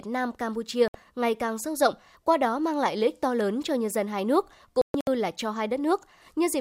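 At 0.88 s there's a digital broadcast dropout. The receiver lost good frames and muted, so the speech just cuts out for about 64 ms before "ngày càng sâu rộng" picks up. A second, rougher one hits at 4.82 to 5.08 s, right after "nhân dân hai nước": a few short holes spread over about 256 ms, about 192 ms lost in total, the longest gap 128 ms, before "là cho". The chunk sizes fit frames of about 32 ms.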